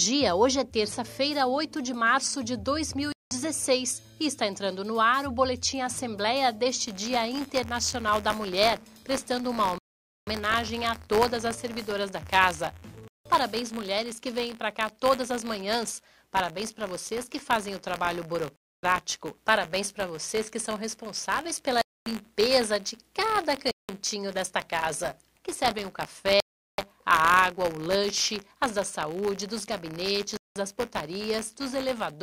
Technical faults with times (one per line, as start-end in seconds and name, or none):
3.12-3.31 Bluetooth stall
6.86-32.23 buffer tearing
9.78-10.27 Bluetooth stall
13.08-13.26 Bluetooth stall
18.56-18.83 Bluetooth stall
21.81-22.06 Bluetooth stall
23.71-23.89 Bluetooth stall
26.40-26.78 Bluetooth stall
30.37-30.56 Bluetooth stall